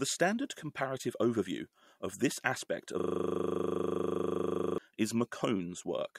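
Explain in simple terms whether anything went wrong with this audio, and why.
A system hang loop runs from 3.00 to 4.78 s in this speech. The computer froze while the sound hardware kept replaying the same 40 ms scrap of audio, about 45 times, so the speech gives way to a steady buzz repeating 25 times per second.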